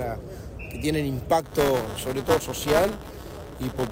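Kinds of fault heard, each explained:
Buffer tearing: from about 1.44 s to the end, the sound takes on a steady robotic buzz at 200 Hz, the rate at which the writer and the reader of the playback ring buffer cross each other. In every period, roughly a tenth of the buffer replays audio from around 15 ms earlier, with hard joins at both edges. Buffer underrun dropouts leave gaps or clicks at irregular points. Here nothing goes silent, and the rattle stays locked to one rate while signal is present.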